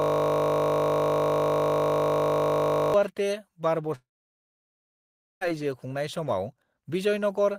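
Right from the start, already running, there's a system hang loop up to 2.94 s: a 20 ms chunk of audio repeats exactly, around 146 times, so you get a steady 50 Hz buzz while the machine or driver is stuck cycling the same buffer.

Then from 3.95 s to 5.43 s the sound turns into a short fading buzz or hiss and drops to near silence for about 1.37 s. When it resumes, roughly 1.46 s is simply gone, most likely a long network dropout.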